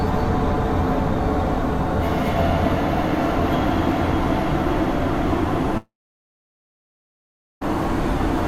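At 5.77 s the music collapses into a fading buzzy smear of its last sound, then near-silence for about 1.7 s until it resumes at 7.63 s with material skipped, likely a long network dropout. Spectrogram: blurred, decaying bands, then an empty gap.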